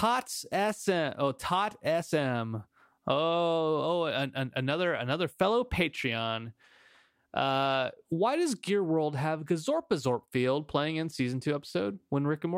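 Listening through the speech, nothing stood out as a technical problem at any point.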